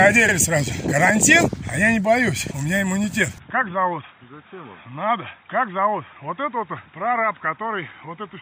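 At 0.28 s, repeated frames replay a 52 ms block once, which fits two duplicated compressed frames, causing a brief stutter, visible as an identical waveform segment twice. From 3.38 s to the end, the sound turns duller and roughly 5 dB quieter, likely from the input switched to a poorer device. The spectrogram shows a sharp ceiling at 3.8 kHz, a new noise floor about 40 dB down, and no gap at the switch.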